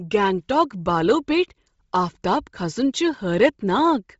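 Bluetooth LC3 compression runs through the whole of this speech clip: nothing is present above 7.7 kHz, and the upper range that remains has a breathy, grainy, noise-filled quality from heavy codec damage. The likely cause is Bluetooth LE Audio's LC3 transform codec at a low bitrate, which fits about 24 kbps with 7.5 ms frames. It discards much of the high-frequency detail and substitutes generated noise, so the top of the band sounds hissy rather than clear.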